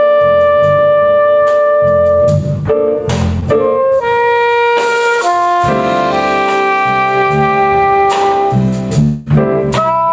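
At 3.40 to 3.58 s, short concealed packet loss: about 20 ms of audio arrived too late, and the receiver bridged it by extending the preceding sound, leaving a brief smeared wobble.

From 9.03 to 9.30 s, the audio turns into a fading continuation for a little over a fifth of a second before resuming with a small piece skipped, likely a long network dropout.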